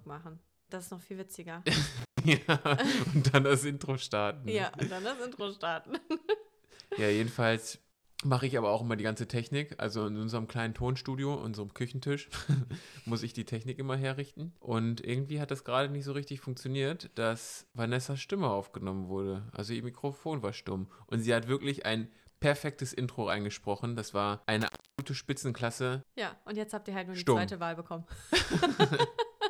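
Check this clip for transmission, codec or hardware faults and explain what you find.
Two dropouts from an intermittent contact are audible: one from 1.98 to 2.25 s, the other from 24.61 to 25.07 s. A loose plug or cable is briefly losing connection, so the signal path opens for about 123 ms in the first event and about 295 ms in the second. The audio cuts out abruptly with crackle as the contact breaks and remakes. During each gap faint hiss remains.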